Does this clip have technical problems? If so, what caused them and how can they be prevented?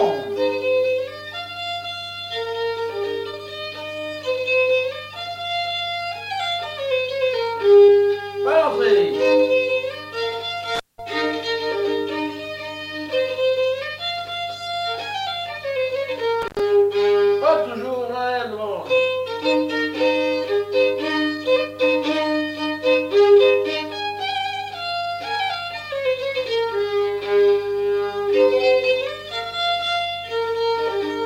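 Yes. There is intermittent contact at 10.75 to 10.99 s and at 16.42 to 16.60 s. A loose cable or plug opens briefly, for 186 ms and then 87 ms. The sound drops out with crackle at each edge. Secure and inspect connectors and cables before recording.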